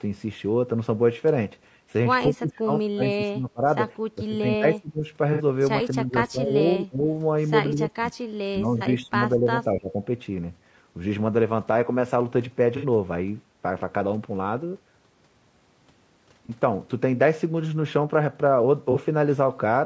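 The speech carries a rough, grainy texture from start to finish, with noise filling the gaps between harmonics, which is likely low-delay AAC compression (AAC-ELD) at a rate around 32 kbps. On a spectrogram the harmonic stripes look blurred and speckled, and the band-limited audio shows nothing above 8 kHz.

From 2.3 to 3.64 s, 4.15 to 5.06 s, 5.94 to 6.52 s, 6.82 to 7.07 s, 7.73 to 8.14 s, 8.51 to 9.2 s and 9.36 to 9.96 s, the speech dips by roughly 15 to 30 dB. The deepest dip, near 30 dB, comes around 6.8 to 7.1 s. This is likely speech suppressed in double talk: the echo canceller could not tell the talker from the far-end echo during overlap and turned both down. In the waveform the envelope pinches abruptly, and the spectrogram thins or goes dark in patches.

AAC frame loss with concealment appears at 5.33 s (60 ms), 8.78 s (30 ms), 12.77 s (60 ms), 16.46 s (30 ms) and 18.92 s (30 ms), which fits one or two lost frames of about 30 ms each. 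The decoder patched each gap from the previous spectrum, so each one sounds like a brief smeared, noisy or phasey patch. On a spectrogram it shows as a short, smudged, horizontally stretched block.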